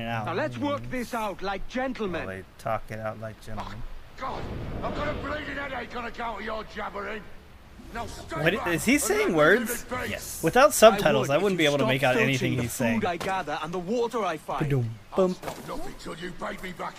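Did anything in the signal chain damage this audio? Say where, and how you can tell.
No, no signal-chain damage heard.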